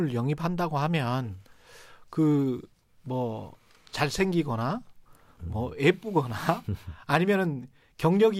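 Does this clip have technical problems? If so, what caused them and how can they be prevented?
No, this clip has no technical problems, so there is nothing to prevent.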